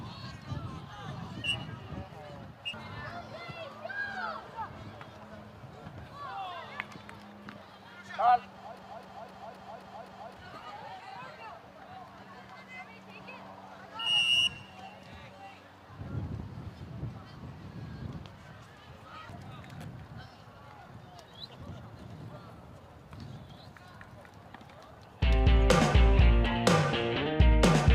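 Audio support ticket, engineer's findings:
Broken-record loop, 8.79 to 10.36 s. A 0.26 s fragment repeats exactly, back to back, six times. Likely a stalled player or stream buffer resending its last held block. Audio due in that span is lost, not delayed.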